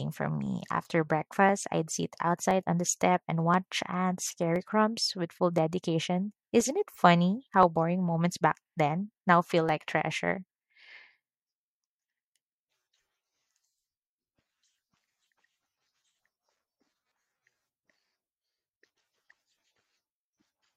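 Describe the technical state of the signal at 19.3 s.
At 19.3 s the speech falls within periodic USB or driver dropouts, which run from 0.46 to 19.91 s. Every 1.02 s roughly half a millisecond of audio is skipped, leaving a tick. The strict spacing, audible only under signal, separates it from random clicks.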